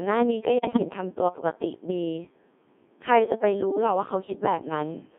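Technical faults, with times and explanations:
Throughout, Codec 2 vocoder: the speech has that robotic, buzzy quality you get when nothing of the original waveform survives. The sound points to a very low rate, around 1.6 kbit/s, where only pitch, voicing, energy and a rough spectral envelope make it through and the decoder rebuilds the speech from a set of sine waves. Heavy damage here, and the whole thing sits in a narrow line band of about 200 Hz to 3.5 kHz.
0.57 to 0.79 s, bit errors on digital voice radio: for roughly a quarter of a second the synthetic speech falls apart into warbly, bleepy gibberish, with sudden jumps in pitch, loudness and tone colour. The error rate is high, something like one bit in seven flipped. In a vocoder this sparse each bit steers a whole frame's pitch, level or spectrum, so each of the five frames hit in a row is corrupted as a whole.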